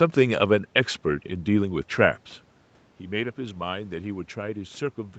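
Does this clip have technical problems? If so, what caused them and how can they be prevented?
No, nothing here needs preventing: the speech tops out at 8 kHz as expected for this wideband call path, the room's background noise belongs to the recording, and the level shift around 2 s is just the talker changing distance from the microphone.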